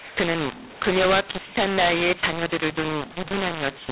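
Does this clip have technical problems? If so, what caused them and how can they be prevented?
Yes, a mu-law and A-law mix-up runs through the whole clip: the speech was written as mu-law but decoded as A-law, so levels come out scrambled, giving harsh, gritty speech and noise filling the pauses. Prevent it by making both ends agree on the G.711 law.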